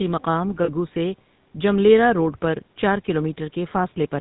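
Throughout, the speech has a buzzy, gravelly roughness and nothing above 4 kHz, the plainly audible mark of the GSM full-rate codec at about 13 kbps rebuilding the sound from a coarse vocal-tract model. From 0.64 to 0.70 s the sound freezes into a brief rough, metallic ring. These are lost GSM frames: the decoder repeated the last good frame's settings, and the 40 ms gap fits two lost 20 ms frames.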